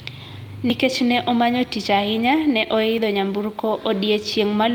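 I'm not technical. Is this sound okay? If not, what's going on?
No. A dropped buffer (overrun) at 0.7 s and again at 2.98 s, just after "omanyo tich ahinya ne", makes the speech jump ahead. The recording software likely fell behind, so short chunks (roughly 0.07 s, then less) were overwritten and lost.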